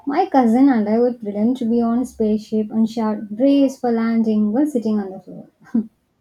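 No technical faults are audible anywhere in the recording.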